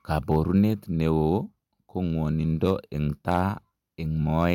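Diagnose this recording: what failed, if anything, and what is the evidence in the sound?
A gain stage ahead of the converter or sample-format conversion let the speech exceed full scale, so the waveform was cut flat at the ceiling: hard clipping. It occurs from 0.17 to 0.58 s, 2.65 to 2.71 s, 3.29 to 3.42 s, and from 4.40 s to the end, overdriven by about 1, 2, 3 and 1 dB. At these mild levels the flattened peaks add high harmonics heard as brief crackle and roughness on the loudest syllables.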